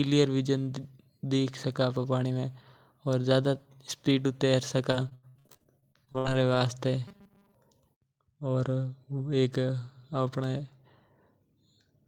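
From 4.91 to 6.62 s, repeated packet loss leaves over a dozen holes, the longest 80 ms, patched by extending prior audio, giving choppy, robotic sound. From 7.08 to 7.55 s, a rigid 200 Hz metallic buzz replaces most of the sound, likely robotic sound from repeated short buffers, about 5 ms long.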